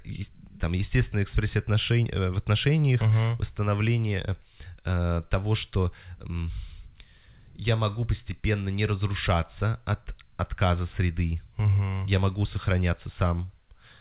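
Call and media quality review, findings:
No faults found: the speech comes through a call path band-limited to nothing above 4 kHz, consistent with narrowband G.711-style telephone coding, with no dropouts, level jumps or timing disturbances heard.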